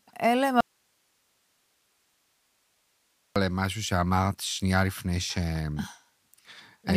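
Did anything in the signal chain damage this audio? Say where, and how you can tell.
Yes. The signal feeding the chain was likely lost at the analogue wiring or input stage while everything downstream stayed live, giving an audio dropout to a faint residue from 0.61 to 3.36 s. The sound cuts abruptly for 2.75 s, leaving only hiss roughly 45 dB down, then snaps back.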